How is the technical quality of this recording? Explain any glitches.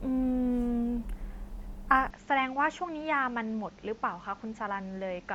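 The recording has one clear fault. From 2.10 s to the end, the speech turns duller and about 5 dB quieter with no gap, most likely because the input switched to a poorer device. Its narrower band leaves nothing above 7.6 kHz, so a spectrogram shows the top cut flat. A new noise floor appears about 30 dB below the signal, and the waveform steps down.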